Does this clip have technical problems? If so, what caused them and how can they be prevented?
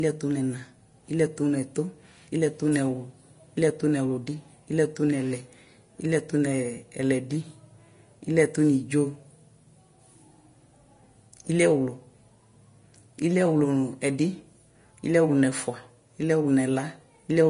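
Yes. Throughout the speech the treble sounds hissy and grainy, with roughened tones and softened consonant attacks, and nothing is heard above about 10.6 kHz. This is likely Vorbis compression at a low setting: the encoder lowered its cut-off and quantised the remaining high band so coarsely that fine detail turned into noise of similar energy. The damage is plainly audible and fits a bitrate near 34 kbps. Encoding at a higher quality setting, or keeping a lossless master, would prevent it.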